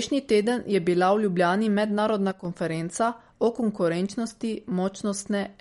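Speech runs through the whole clip with plainly audible MP3 compression damage, likely from an encode at a low bitrate that fits about 48 kbps. Nothing survives above 11.2 kHz, so a spectrogram shows a flat ceiling there, with patchy holes flickering below it and a watery, swirly edge on sibilants. From 2.31 to 2.45 s, just before "konferenca o", there is a sudden gain jump where the level drops by about 7 dB between adjacent samples, likely a gain change applied without a ramp. On the waveform the envelope steps down abruptly and the background noise steps down with it.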